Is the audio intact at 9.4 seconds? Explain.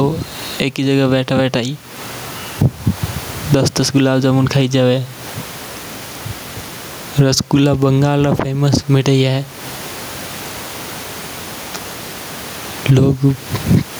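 No. Gain pumping runs through the whole clip, including 9.4 s: the level likely jumps because the gain is set far too high and a fast limiter pulls it down on each loud sound, swinging about 20 dB, so loud and soft parts end up closer in level and the sound is squashed, with the room noise about 33 dB below the speech.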